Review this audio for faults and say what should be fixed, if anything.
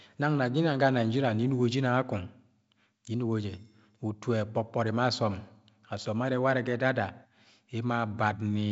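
Nothing here needs fixing: the speech carries G.722 wideband telephone coding at a rate that fits 56 kbit/s, with nothing above about 7.7 kHz and only the light upper-band hiss and slightly grainier lower band that this coding leaves.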